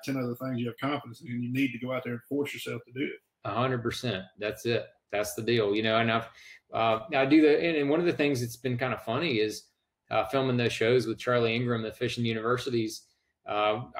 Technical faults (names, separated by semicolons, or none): none